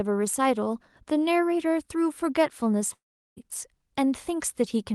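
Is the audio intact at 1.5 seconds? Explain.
Yes, the speech at 1.5 s is intact, with nothing disrupting it as it passes through the WebRTC call path.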